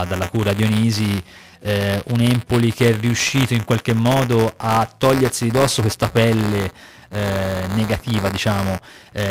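Speech runs through the whole recording with buffer tearing: a steady robotic buzz near 172 Hz that rides on the sound, which fits a 256-sample buffer. Writer and reader have slipped so a small slice of each period, about a twentieth, replays audio roughly 20 ms old, joined hard at both edges. Unlike mains hum, the buzz vanishes whenever the sound stops. Unlike underrun dropouts, it never leaves gaps.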